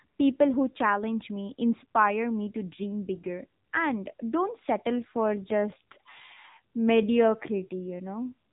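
From the start, the speech has passed through the AMR narrowband mobile codec. Nothing above 3.8 kHz survives, so the sound is dull and boxy. The codec rebuilds speech from a vocal tract model fed by a few pulses per subframe. At a rate that fits about 8 kbit/s, the damage is plainly audible. Voiced sounds turn buzzy and synthetic, and sibilants lose their edge.

At 4.94 s the pace suddenly drops, and it stays slow to the end. The audio runs at 0.705 times its former speed, yet the pitch does not fall. This points to a time-stretched section. Software likely lengthened the passage by repeating short pieces of audio. Syllables drag.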